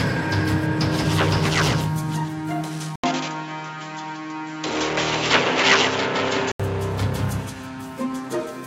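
At 2.96 s the sound drops out for about 80 ms, then returns duller and boxier, with nothing above 7.6 kHz, a level shift of around 5 dB, and a faint new noise floor well below the signal. This lasts until 6.60 s, when the full bandwidth comes back. The pattern points to the likely cause: the input switched to a poorer device for that stretch, one with a narrower band, its own level and its own background noise.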